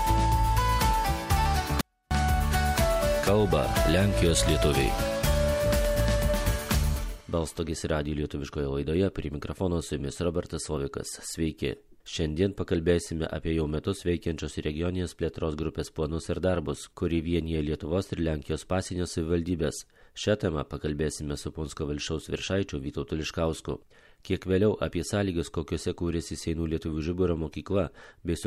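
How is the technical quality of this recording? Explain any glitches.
There is one glitch: a 24-bit alignment error that makes the sound far too quiet from 1.81 to 2.11 s. Samples held in the low 24 bits of a 32-bit word were read as full 32-bit values, so the level falls by about 48 dB at once. The sound stays clean and is barely audible rather than gone. That sets it apart from a dropout, which leaves true silence, and from a fade, which changes level gradually.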